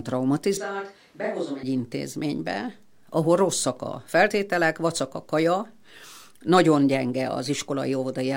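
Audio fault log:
0.57–1.63 s, switch to a distant microphone: the speech suddenly turns roomy and hollow, with thinner bass. Level falls by about 10 dB, and room noise sits about 30 dB under the speech. The close microphone was likely lost for a farther one.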